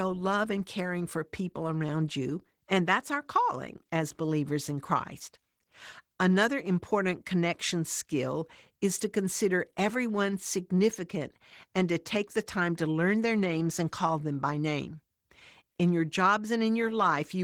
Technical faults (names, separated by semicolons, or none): Opus voice compression